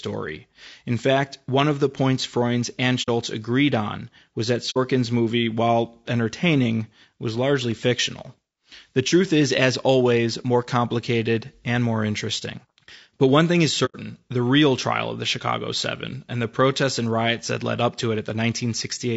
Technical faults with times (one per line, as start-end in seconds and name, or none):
0.00-19.16 low-delay AAC compression
3.02-3.09 AAC frame loss with muting
4.70-4.78 AAC frame loss with muting
13.85-13.96 AAC frame loss with muting